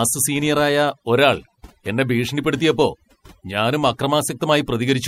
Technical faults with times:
0.00-5.08 overdone noise removal

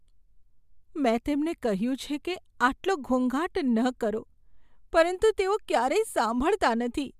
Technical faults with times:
none

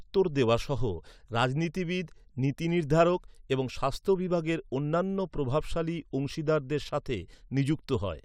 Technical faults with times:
none

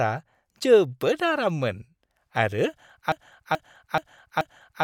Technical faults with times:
3.12-4.83 broken-record loop

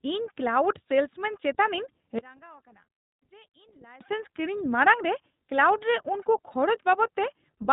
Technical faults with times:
0.00-7.73 iLBC codec
2.19-4.01 one channel inverted

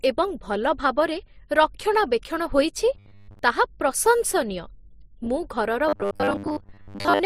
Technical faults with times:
0.00-7.26 transcoding between lossy codecs
2.95-3.39 robotic sound from repeated short buffers
5.89-7.26 robotic sound from repeated short buffers

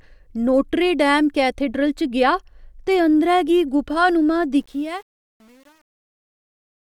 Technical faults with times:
4.56-6.81 truncation distortion on a fade

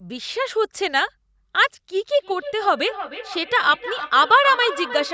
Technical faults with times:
2.19-5.14 feedback echo between two devices

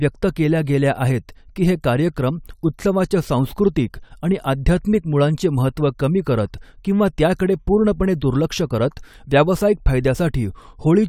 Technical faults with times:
none

